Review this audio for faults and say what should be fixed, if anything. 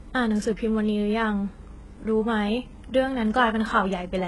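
Throughout the speech, the treble sounds synthetic, with gritty, lispy s sounds and nothing above 11.5 kHz. This is likely HE-AAC compression: at what sounds like a very low bitrate, around 12 kbps, the treble is rebuilt by copying lower bands upward rather than coded directly. Encode at a higher bitrate, or use a codec that codes the full band, to prevent this.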